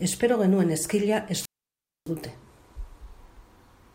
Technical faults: wireless microphone squelch dropout

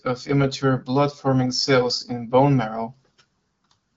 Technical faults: none

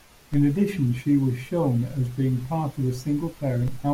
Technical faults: DC step

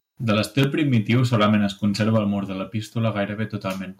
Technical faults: microphone overload; microphone volume stepped down

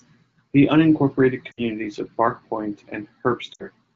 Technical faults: lost AMR speech frames

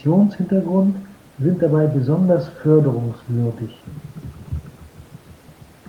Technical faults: none

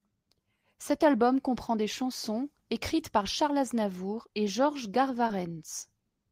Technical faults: short concealed packet loss

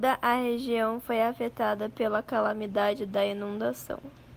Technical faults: none

